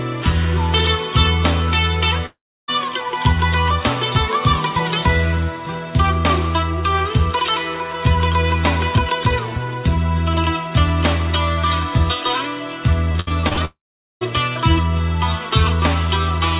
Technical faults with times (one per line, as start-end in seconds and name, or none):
2.26-2.70 long network dropout
13.12-13.59 repeated packet loss (robotic sound)
13.65-14.29 long network dropout